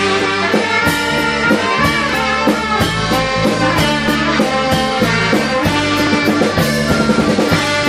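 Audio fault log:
2.09 s, 4.08 s, 6.07 s: overlap between stream segments. Each event is a short click or tiny skip where the waveform jumps. Adjacent 2.0-second segments carry overlapping timestamps, so playback discards the overlapped span even though that sound was not duplicated. The lost portions are about 5 ms, 10 ms and 15 ms, growing at each boundary. The events repeat at roughly 2-second intervals, matching the segment length.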